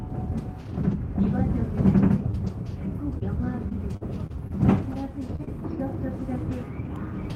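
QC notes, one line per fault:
0.91–6.87 s, scattered short gaps: about seven brief dropouts, the longest around 40 ms, patched by extending preceding audio, leaving isolated ticks and small smears.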